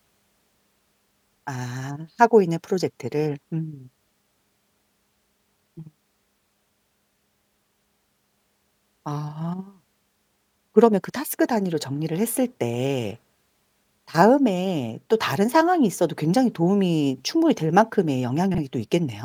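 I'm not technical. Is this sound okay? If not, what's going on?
No. Right near the end, from about 18.51 to 18.58 s, the speech briefly turns into a garbled flutter, as if a tiny piece stumbled over itself. This is frames out of order: two short neighbouring chunks of audio were played back swapped, so that moment's halves come in the wrong sequence. The size of the glitch fits two single blocks of about 32 ms each. Nothing is missing. It's just scrambled for an instant.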